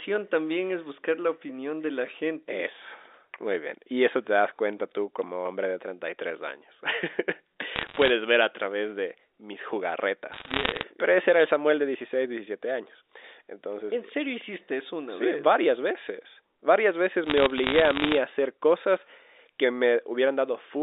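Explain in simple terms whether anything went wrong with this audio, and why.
Three short bursts of crackle are bit errors on a digital phone line: from 7.76 to 8.10 s, just before "ver a través de", from 10.32 to 10.83 s, and from 17.24 to 18.18 s, ending just before "a hacer cosas que". On this narrow-band telephone line, a small fraction of the transmitted bits, under one percent, flipped. Each flipped bit corrupts one sample, and a hit on a high bit causes a sharp tick, and many ticks together sound like crackle over the speech.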